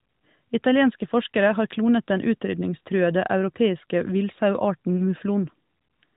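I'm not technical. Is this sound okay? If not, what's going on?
Yes, nothing stood out as a problem when listening to this clip.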